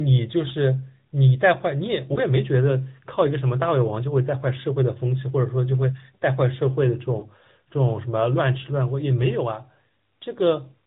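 Throughout, the speech sounds band-limited and buzzy, with a synthetic edge on voiced sounds and nothing above 4 kHz. This is the AMR narrowband mobile codec at work. It samples at 8 kHz and rebuilds the voice from a vocal-tract filter excited by a few coded pulses per subframe. The codec damage is plainly audible, and the degree of roughness fits a mid-range mode around 10.2 kbps rather than the top rate.

At 2.14 to 2.19 s there is a brief dip or warble, and the same thing happens again at 7.20 to 7.25 s. Each is short enough to point to a single lost 20 ms frame. These are lost AMR speech frames: the frame failed its checksum, so the decoder filled the gap by repeating the previous pitch and filter settings at reduced gain, and the voice resumed a little rough immediately after.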